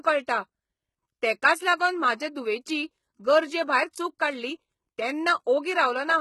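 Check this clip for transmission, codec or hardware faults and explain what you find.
One codec fault runs through the whole speech clip. HE-AAC compression, from start to finish, is the likely cause: the lower spectrum is coded directly and the treble is rebuilt by spectral band replication, copying lower bands upward under a coarse envelope. The damage is heavy, which fits a bitrate around 16 kbps. Nothing reaches above 11.8 kHz, and the regenerated top end is not the original, so s sounds come out gritty, metallic or lispy where the copied harmonics fail to line up.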